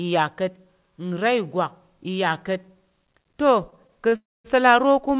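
A speech recording carried over a call link, band-limited to nothing above 4 kHz, which fits a G.711 mu-law path. From 3.7 to 4.14 s there are repeated stalls (stutter). The audio halts four times. Each gap is bridged by extending the sound just heard, about 77 ms of fill in total. The longest single gap is 31 ms. Around 18% of that span is concealed. Packets were arriving late, so the jitter buffer kept running dry. Nothing is lost, but the speech drags and stutters. Right after, from 4.16 to 4.46 s, comes a call audio freeze. The last sound is held and fades out, lasting 288 ms, with about 220 ms of it silent. The speech then resumes where it stopped. The likely cause is packets held up in transit, emptying the jitter buffer. The result is an inserted gap rather than missing speech.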